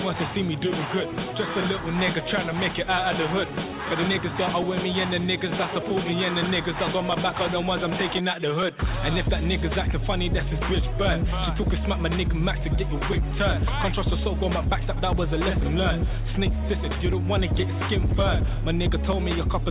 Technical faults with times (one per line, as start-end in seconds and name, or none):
none